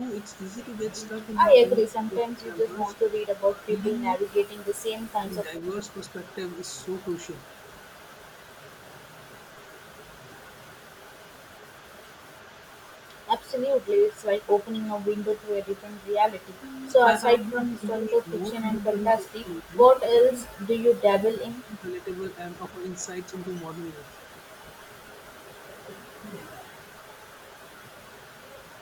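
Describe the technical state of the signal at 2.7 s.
At 2.7 s the speech sits near the end of a stretch of speech suppressed in double talk, running from 1.9 to 2.76 s. Across about half a second of that span the voice dips, by up to about 10 dB at its deepest. The likely cause is an echo canceller that could not tell the near talker from loudspeaker echo while both sides spoke. Unlike a packet dropout, the voice is turned down by the canceller rather than lost in transmission.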